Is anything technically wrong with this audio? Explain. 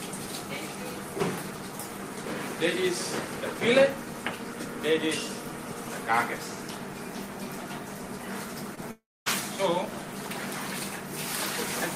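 Yes, there are two network-related glitches close together near the end.

Short concealed packet loss, 8.75 to 8.79 s: about 20 ms of audio didn't reach the decoder in time, so the receiver stretched the preceding sound to cover the gap before blending back. You hear a quick smear or wobble.

Long network dropout, 8.91 to 9.28 s: here the sound carries on as a fading buzz or hiss, then goes nearly silent for roughly a quarter of a second before resuming, with about 0.36 s simply missing. That's most likely a network dropout with concealment trying to cover it.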